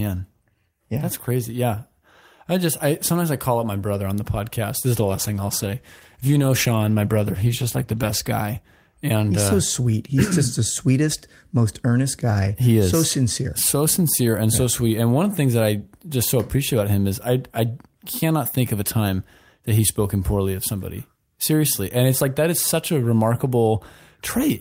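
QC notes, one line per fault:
4.96–8.37 s, call bitrate drop: speech turns rough and muffled for about 3.4 s, which fits the encoder squeezed from 32 to 15 kbps, coding coarser and dropping highs.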